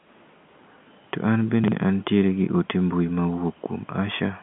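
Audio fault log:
1.64–1.72 s, chunks out of order: one 40 ms piece plays a chunk late just before "an tiere gi ote", giving a jumbled blip; unlike a dropout, nothing is missing.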